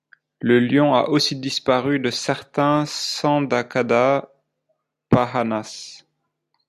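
Speech recording; no technical faults can be heard anywhere.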